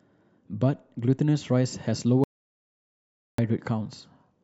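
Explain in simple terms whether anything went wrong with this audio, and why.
Something did go wrong. There's an audio dropout to silence from 2.24 to 3.38 s, where the speech cuts off mid-flow and leaves dead, total silence, not even room noise. That points to the input likely being lost while recording carried on, so just over a second is gone.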